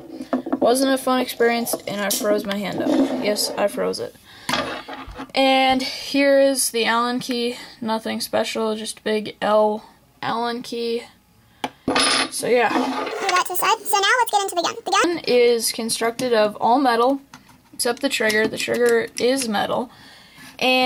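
The audio contains one section at the wrong speed, from 13.11 to 15.04 s. In that stretch playback runs at 1.65 times the original rate, so timing and pitch shift together: the sound turns hurried and rises by roughly ten semitones, then returns to normal at 15.04 s. The likely cause is an editing or playback step that fitted this segment to the wrong clock, stepping through its samples too quickly.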